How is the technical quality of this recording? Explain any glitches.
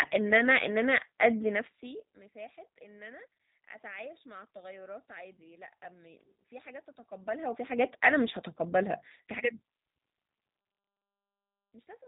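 The recording has one clear fault, G.729 codec damage, present for the whole clip.

G.729 codec, throughout: the speech has been rebuilt from a compact model of the vocal tract, pitch and a few pulses per frame, so it sounds rough and slightly synthetic, consistent with 8 kbit/s VoIP coding. A spectrogram shows nothing above about 3.8 kHz, with smeared, grainy harmonics.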